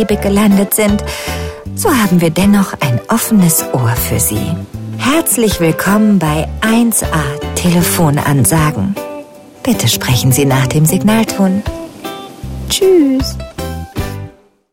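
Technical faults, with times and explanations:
No technical faults can be heard; the signal stays continuous and intact throughout.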